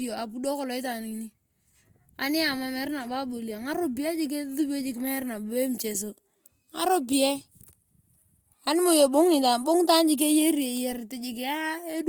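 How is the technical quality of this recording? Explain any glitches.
The recording is compromised by audible codec damage for its whole length. The speech sounds rough and grainy, with a hiss-like texture where clean detail should be. This is likely Opus compression in its music (CELT) mode, at a rate consistent with around 24 kbps. With too few bits, the encoder keeps each band's overall energy but fills in detail with copied lower bands or noise. The top end still reaches about 20.2 kHz, so it isn't muffled. Unlike MP3, there is less swirling and few holes, just graininess.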